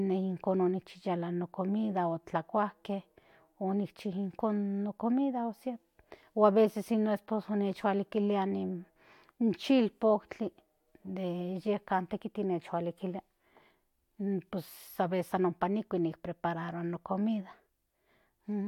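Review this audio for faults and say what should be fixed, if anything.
No faults; nothing needs fixing.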